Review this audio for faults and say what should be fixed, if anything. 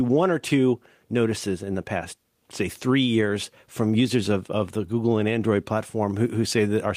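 Nothing needs fixing, since no technical fault can be heard anywhere in the speech signal.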